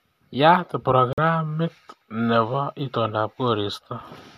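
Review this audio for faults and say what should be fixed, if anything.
A digital broadcast dropout mutes the speech from 1.13 s to 1.18 s, leaving a hole of about 48 ms, which fits two consecutive frames failing their checksum. The receiver silenced output until valid frames resumed, so that material is unrecoverable. Prevent it with stronger error protection or better reception margin at the receiver.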